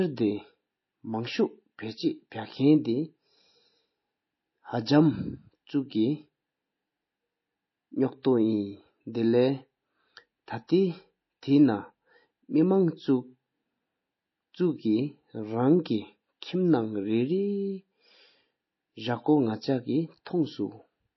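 Speech, with a watery, swirly edge throughout and nothing above 5.8 kHz: likely heavy MP3 compression, and the damage fits a low bitrate around 24 kbps.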